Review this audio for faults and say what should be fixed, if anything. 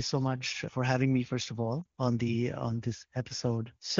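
At 1.81 to 1.86 s there is a 40 ms stretch of lost AMR speech frames, which fits two consecutive 20 ms frames failing their checksum. The decoder fills the gap by repeating the last good pitch and vocal tract parameters at falling gain, so the sound briefly smears and dips. In this AMR-WB stream at what sounds like the 23.85 kbit/s mode, the gap is long enough to drop to near silence, and the signal recovers rough for a moment. To prevent it, improve radio link quality or enable stronger channel protection so fewer frames arrive corrupted.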